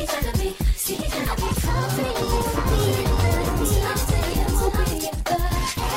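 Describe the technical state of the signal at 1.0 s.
At 1.0 s the signal is intact, with no audible technical fault at that point.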